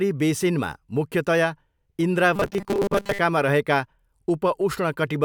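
From 2.36 to 3.20 s the speech turns into robotic sound from repeated short buffers: a rigid, metallic buzz fixed at 200 Hz that only loosely tracks the speech. This likely comes from audio arriving too late, so the player repeats a 5 ms chunk in place of most of the real signal.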